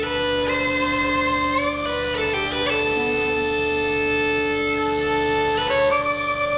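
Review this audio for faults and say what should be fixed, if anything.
No faults turn up in this audio, so nothing needs to be fixed.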